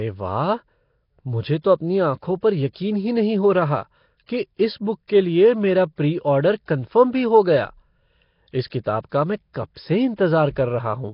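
Speech throughout the clip carries a rough, hissy halo and a smeared, underwater quality, with nothing above about 5.3 kHz. This is heavy Nellymoser compression, likely from Flash's Nellymoser Asao codec at a rate near 22 kbps. Quieter bands that get no bits are filled with noise. That steady grainy hiss sets it apart from MP3-style low-bitrate damage, which sounds swirly and metallic rather than noisy.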